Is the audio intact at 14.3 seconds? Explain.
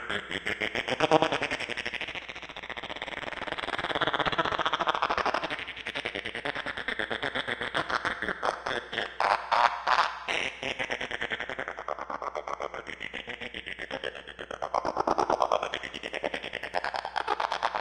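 No. At 14.3 s the audio carries mains hum, a steady 60 Hz tone present throughout the clip rather than only at that moment. It sits around 30 dB below the sound it accompanies, so it forms a constant low drone underneath. This kind of interference arises when the power line couples into the signal path, through a ground loop or a nearby transformer.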